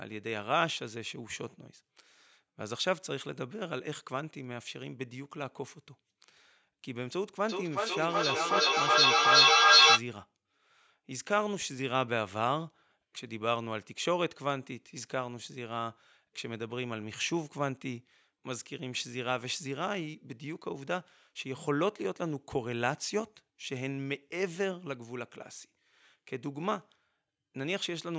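From 7.49 to 10.06 s, feedback echo between two devices returns the sound roughly every 400 ms, thinner and more ringing each pass. Unlike a single device's echo, which fades, this loop builds up, with repeats climbing to about 12 dB above the speech.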